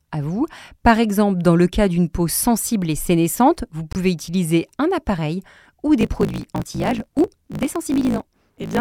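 Right after "sensible et sénescente vous", from 3.93 to 3.97 s, the speech skips ahead with a brief glitch before "utiliser un appareil ou". That's likely a broken MP3 bit reservoir: a cut left the next 24 ms frame reaching back for borrowed data and finding the wrong bytes.

Then from 5.99 s, just after "utiliser un appareil ou", to the end, there's a 54.4 Hz buzz and the speech runs 1.16 times fast with its timbre unchanged. That's a block size mismatch (truncated), which fits 1024-sample blocks being written and their tails getting chopped off by the next stage.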